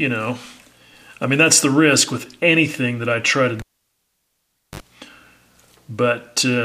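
At 3.59 s a cable is pulled and plugged in while live. A pop opens a gap of about 1.16 s of near silence. As the plug reseats, its tip briefly touches first. That gives a 47 ms burst of 50 Hz mains buzz. A second pop follows at 4.8 s as sound returns.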